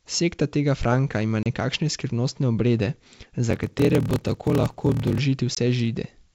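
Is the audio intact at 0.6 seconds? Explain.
Yes, the audio is intact at 0.6 seconds, with no fault at that moment.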